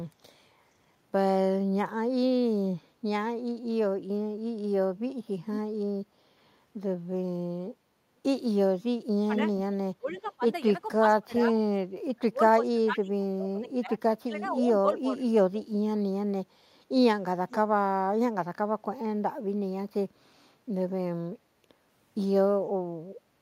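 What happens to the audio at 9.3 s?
From 9.27 to 9.46 s the speech dips sharply, falling by roughly 15 dB at its deepest, with the affected stretches adding up to around 50 ms. This is speech suppressed in double talk, likely an echo canceller turning down the talker while the far side also spoke.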